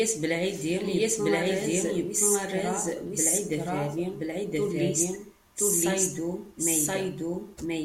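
From the start, the speech carries a doubled audio track: a second full-band copy trails the original by about a second, at roughly the same level. The copy is dry, with no decay or room colour, so it reads as a distinct overlapping repeat rather than an echo. The cause is likely a second capture of the same signal through a slower path, or an edit holding two copies out of step.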